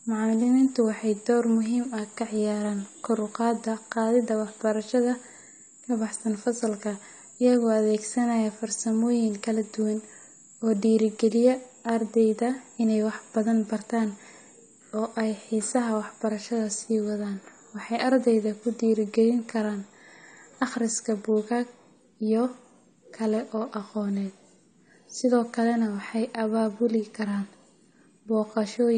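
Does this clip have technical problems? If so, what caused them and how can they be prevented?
Yes. Throughout the speech there is plainly audible codec damage, most likely from AAC compression at a low bitrate. Nothing remains above 9 kHz, so the top end sounds dull, and sibilants and sustained vowels carry a smeared, warbling fizz. The encoder, short of bits, lowered its cut-off and quantised the remaining frequency lines coarsely, leaving gaps that shift from frame to frame. The damage fits roughly 32 kbps AAC-LC. To prevent it, encode at 96 kbps or more, or keep a lossless master and avoid repeated lossy transcodes.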